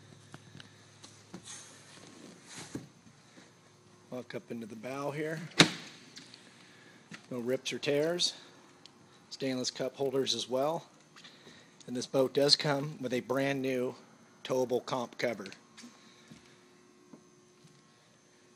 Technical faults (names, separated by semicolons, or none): resampler restarted on every block